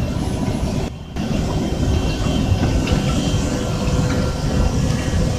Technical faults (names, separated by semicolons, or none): sudden gain jump